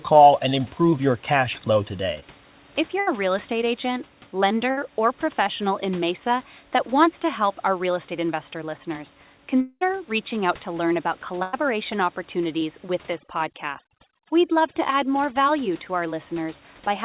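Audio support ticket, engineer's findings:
Brief smear at 2.20–2.24 s. Short concealed packet loss in the jitter buffer/decoder: about 20 ms of audio arrived too late, and the receiver bridged the gap by extending the preceding sound for roughly 16 ms before blending back into live audio.

Held buzz or fading hiss at 3.00–3.09 s, 4.71–4.79 s (just before "or professional in") and 11.43–11.55 s (right after "out to learn about"). Burst of packet loss: consecutive packets were missing, about 80, 60 and 100 ms respectively. Concealment repeated the last sound while attenuating it, and playback resumed further along with that audio gone.

Longer fading buzz or hiss, then a brief hush, at 9.61–9.83 s, between "real estate investor listeners" and "reaching out to learn". Likely a long network dropout: about 200 ms was extended and faded by concealment, then around 40 ms of silence before the stream resumed with the intervening audio lost.

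Dropped, twinkling background at 13.13–15.36 s. Overdone noise removal: suppression was set too aggressively for the room noise, which sits about 26 dB under the speech. It gated individual frequency bands to nothing and took the quieter speech detail with them. The band limit at 4 kHz is consistent with G.711 mu-law at 64 kbps.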